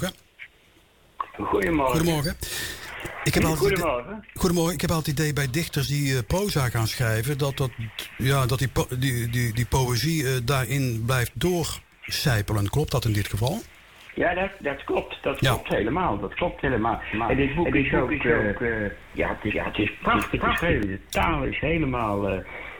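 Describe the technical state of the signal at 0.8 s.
At 0.8 s the signal is intact, with no dropout, click, distortion or other fault audible at that moment.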